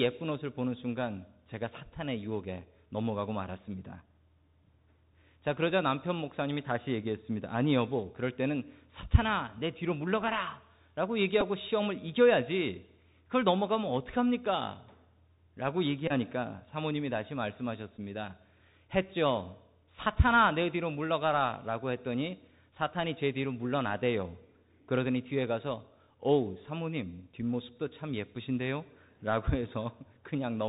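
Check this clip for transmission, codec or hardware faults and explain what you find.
The speech carries two faults: Bluetooth CVSD coding throughout and three Bluetooth headset packet repeats.

The Bluetooth CVSD headset codec runs throughout the clip. It sends one up-or-down bit per sample at 64 kHz with an adapting step, so nothing passes above 4 kHz. The damage is plainly audible: s sounds turn scratchy, loud high sounds distort where they outrun the step, and granular hiss sits under the speech.

Bluetooth headset packet repeats occur at 11.41 s, from 16.08 to 16.12 s, and from 17.97 to 17.99 s, replacing about 7.5, 22.5 and 11.2 ms of audio. Those lengths fit runs of two, six and three lost 3.75 ms packets. In each run the chip re-decodes the last good packet, and that repetition produces a buzz near 267 Hz.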